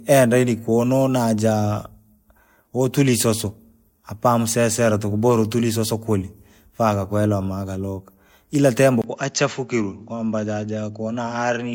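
Throughout the speech, the audio was likely passed through one lossy codec and then re-encoded in another, consistent with a Vorbis stage at around 64 kbit/s followed by MP3 at 96 kbit/s. This transcoding between lossy codecs stacks the two codecs' artefacts, and nothing survives above 16.7 kHz.

At 9.02 s, just after "gakwenda magaluka ila tembo", the input is likely switched to a poorer device. A brief 20 ms gap marks the change. From there to the end, the band stops near 7.6 kHz, so the sound turns dull and boxy, drops about 5 dB in level, and carries a faint new background noise.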